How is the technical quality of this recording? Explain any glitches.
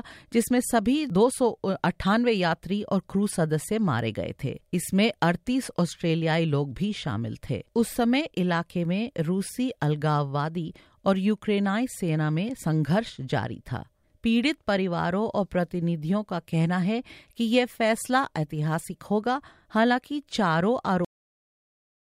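The recording has one glitch, at the very end. Cut-off end at 21.05 s: the last chunk of audio was never written out or played, so the speech halts partway through a sound. It drops straight to digital silence with no natural decay and stays dead silent for the final 1.15 s.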